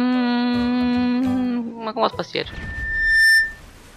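A microphone picked up the loudspeaker it was feeding, and at 1.8 kHz the loop gain rose above one, causing loudspeaker feedback squeal from 2.49 to 3.61 s. A single tone swells over roughly three quarters of a second into a squeal around 10 dB louder than the audio.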